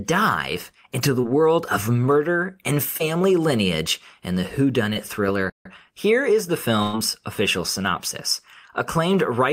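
Packets of about 20 ms each arrived too late for the decoder at 1.21 s (after "into the"), 2.97 s (after "of murder and") and 4.93 s (after "lineage and the"). This is short concealed packet loss: the receiver extends the preceding sound to bridge each hole, giving a quick smear or wobble.

From 5.50 to 5.66 s the speech cuts out for about 153 ms and then carries on. This playback stall was likely caused by the player's buffer running dry or its output thread being held up.

At 6.82 s a burst of packet loss removes about 100 ms. The receiver fills the whole gap by continuing the last sound and fading it, so there is no silence, only a held, dying buzz or hiss before speech resumes at a later point.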